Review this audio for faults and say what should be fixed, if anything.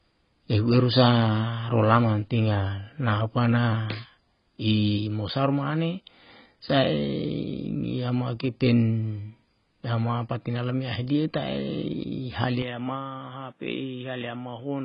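Heavy AAC compression runs through the whole speech clip. Nothing is present above 5.2 kHz. The coder appears to have had too few bits, so it dropped the top of the spectrum and quantised the remaining bands coarsely. The damage is heavy, with dull, smeared speech throughout. That fits AAC-LC at about 16 kbps, the likely cause. To prevent it, encode at a much higher bitrate, or keep an uncompressed master.

At 12.62 s the input switches to a poorer device, and it stays that way to the end. The band narrows at once, with nothing above 3.8 kHz. The level drops by about 10 dB. A new noise floor appears, roughly 40 dB below the speech. There is no silence at the switch, so the change is abrupt. A likely cause is the system moving to another microphone or a headset call profile. To prevent it, lock the recording input so the system cannot change devices mid-take.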